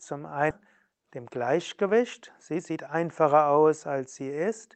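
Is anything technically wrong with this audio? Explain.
Yes, there are two kinds of fault in this speech clip.

At about 0.50 s there is a skip ahead: roughly half a second of audio was discarded, likely by an overflowing jitter buffer, so playback jumps forward and the two sides join with no gap.

From 0.87 to 2.00 s and again from 2.51 to 4.71 s there is jitter buffer speed-up: the over-full buffer repeatedly removed short pitch-period pieces to reduce delay, cutting roughly 70 ms and then about 200 ms. The speech runs 6% and then 9% faster at unchanged pitch, sounding hurried.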